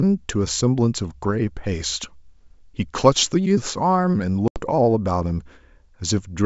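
At 4.48 s the speech drops into a hard-edged hole of about 80 ms, packet loss on an ADPCM call, consistent with roughly four packets going missing. On the waveform the signal falls abruptly to flat silence; the spectrogram shows a clean vertical gap across the full wideband range. When sound resumes, the decoder's adaptive predictor and step size no longer match the sender's, so brief slight distortion follows until it resynchronises by 4.61 s.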